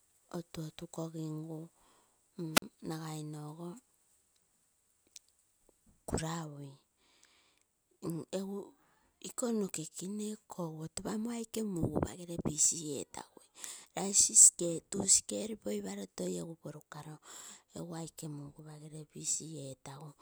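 A wireless microphone squelch dropout hits this speech clip from 2.53 to 2.62 s. The FM radio signal weakens, hiss briefly swells, then the receiver's squelch mutes the output for about 44 ms before the voice returns once reception recovers.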